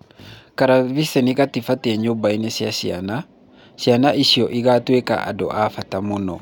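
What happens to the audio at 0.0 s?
Nothing goes wrong at 0.0 s; the audio is intact at that moment.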